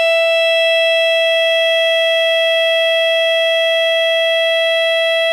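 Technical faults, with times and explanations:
No technical faults can be heard anywhere in this music clip.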